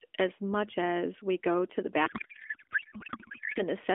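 From 2.06 to 3.61 s, a codec payload misread turns the speech into garbled warble that barely tracks it. Octet-aligned AMR is being read as bandwidth-efficient, so every field is misplaced. Unlike packet loss, this gives continuous nonsense, not gaps or smeared repeats.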